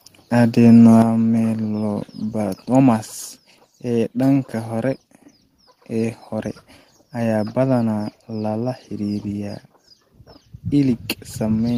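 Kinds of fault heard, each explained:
Microphone volume stepped down: at 1.02 s the whole signal, speech and background alike, falls by about 6 dB in one abrupt step and stays at the lower level. The likely cause is call software cutting the device's input volume after judging the microphone too loud.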